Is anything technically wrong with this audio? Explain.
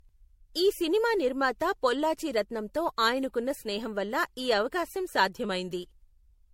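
Yes. Throughout the speech there is generation loss, most likely from the audio being run through an MP3 encoder at 64 kbit/s about five times over. Every pass quantises the signal again on a shifted frame grid, so the noise and spectral gaps pile up rather than staying put. The result sounds swirly and hollow, more smeared than a single 64 kbit/s encode would be. Consonant attacks blur, and nothing remains above 16.5 kHz.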